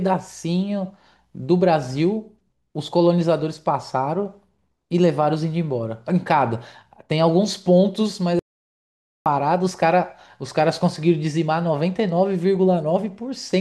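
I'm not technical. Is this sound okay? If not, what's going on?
No. At 8.39 seconds the speech cuts out completely and only returns at 9.26 seconds. That is an audio dropout to silence. For a little under a second there is nothing at all, not even the faint background hiss of the room. Whatever was said in that gap is lost for good. The likely cause is that the input was briefly lost, for example a loose connection or an accidental mute, while the recording kept running.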